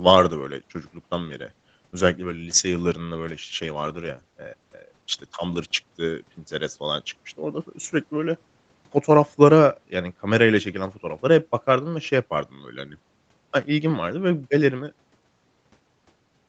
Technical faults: none

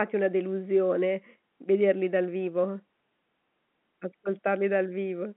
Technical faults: none

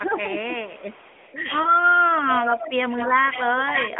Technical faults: speech suppressed in double talk; lost AMR speech frames; echo leak

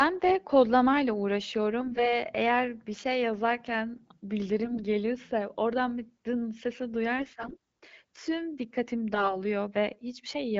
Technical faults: AMR bit errors

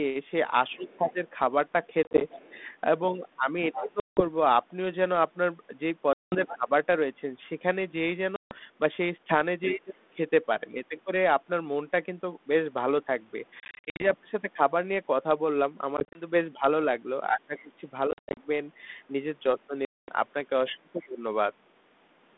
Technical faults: other side's voice leaking through; speech suppressed in double talk; packet loss on an ADPCM call

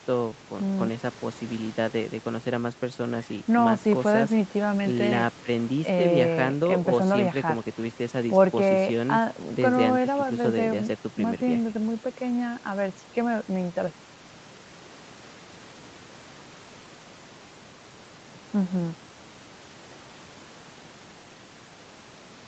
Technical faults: none

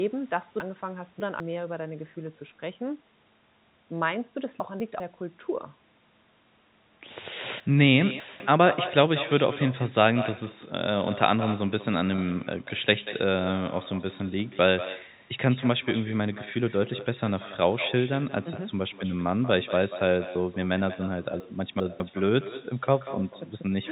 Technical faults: echo with no canceller; chunks out of order; packet loss with pitch repetition

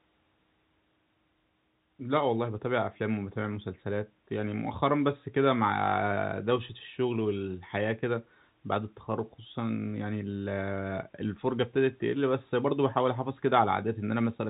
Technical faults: none

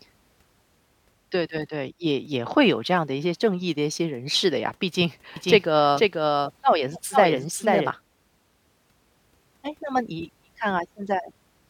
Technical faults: doubled audio track

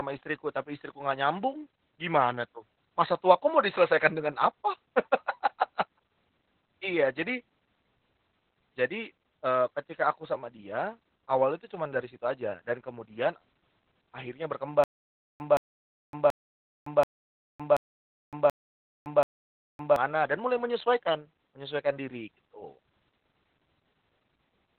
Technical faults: Opus voice compression; stutter with silent gaps

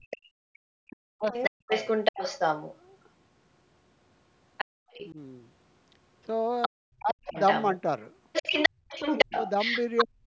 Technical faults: speech suppressed in double talk; other side's voice leaking through; background gated by the echo canceller

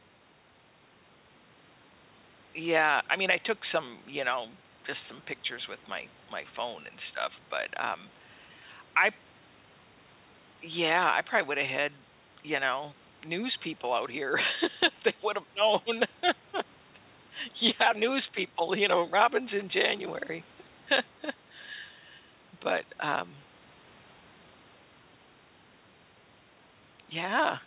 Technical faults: none

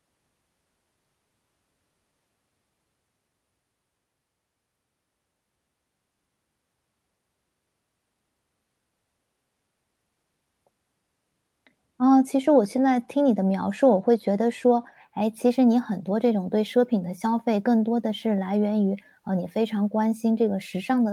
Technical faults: none

